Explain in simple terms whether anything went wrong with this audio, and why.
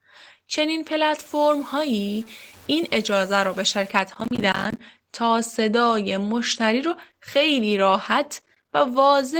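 Opus voice compression is plainly audible across the whole clip. The speech has been squeezed into a small data budget, so the fine detail of the voice is coded coarsely, leaving it somewhat hoarse and faintly robotic even though the high frequencies are still present.

From 1.21 to 3.91 s the sound turns grainy and gritty, with the roughness following the voice's level. This is likely low bit depth without dither: the signal was cut down to very few loudness steps and simply chopped, so quiet parts sound rough.

Processor overload crackle appears from 4.14 to 4.79 s and again from 8.42 to 8.68 s. The computer repeatedly failed to deliver small chunks of audio, each about a hundredth of a second long, on time. Each missed chunk became a tiny silent gap, and the run of gaps sounds like crackling.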